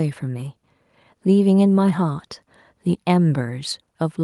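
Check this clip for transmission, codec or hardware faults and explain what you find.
Nothing in this speech clip points to a transmission, codec or hardware problem. Every part of the recording sounds as it should.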